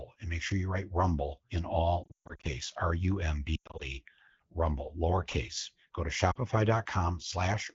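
Lost AMR speech frames hit just after "you write rumble in", from 2.03 to 2.46 s, again at 3.56 to 3.84 s, and briefly at 6.31 s. Corrupted frames force the decoder to repeat its last pitch and vocal tract settings at falling gain, so speech smears, warbles and fades. A spectrogram shows frozen, dimming harmonic bands and thin gaps, and the waveform shows a decaying envelope.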